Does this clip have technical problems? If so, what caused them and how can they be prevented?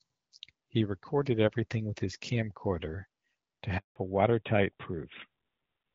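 Yes. At 3.78 s, right after "with his camcorder to", the speech fades out within a few tens of milliseconds and stays silent until 3.96 s. This is a handover gap of about 180 ms. While the call was moving to another network, no speech frames arrived, so that stretch of audio is simply missing. Unlike scattered packet-loss dropouts, it is one clean silence, and the sound comes back with a different character. Keeping the handset on a single strong network, or using networks that do seamless voice handover, prevents it.

From 3.96 s to the end, everything above 4 kHz is gone, and the speech sounds duller and rougher than the wideband audio before the gap, which carries only light HD Voice coding. This is a fallback to narrowband. The new link could not carry HD Voice, so the call dropped from AMR-WB to a narrowband codec. The sound fits AMR-NB at around 12.2 kbit/s. An ordinary low-pass filter would not behave this way, because here the bandwidth drops suddenly at the handover and stays down. 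Making sure both networks support AMR-WB along the whole call path prevents it.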